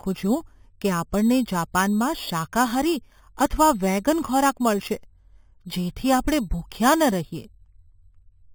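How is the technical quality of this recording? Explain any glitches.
The recording has one fault, present throughout. Imaging from sample-and-hold upsampling: audio raised from 8 kHz to 48 kHz by sample repetition leaves mirrored copies around 4–8 kHz, about 16 dB down, a metallic fizz that tracks speech level and moves opposite to pitch, unlike steady hiss.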